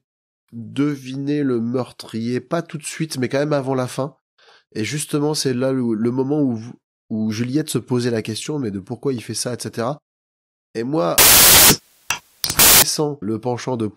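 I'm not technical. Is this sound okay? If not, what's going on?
No. From about 11.18 to 12.82 seconds the speech is swamped by a loud burst of hiss, like harsh static. This is samples built from the wrong bytes: each tiny slice of sound is stored as several bytes, and here the player stitched those bytes together wrongly, so the fine, jittery detail ended up as the loud part. That turns the speech into noise.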